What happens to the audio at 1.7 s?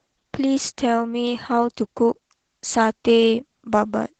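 At 1.7 s the clip is under Opus voice compression, as it is throughout. A 16 kbps hybrid stream splits fullband speech between linear-prediction coding below 8 kHz and a thin transform layer above, in 20 ms frames, so the voice sounds plainly muffled, hoarse and slightly robotic.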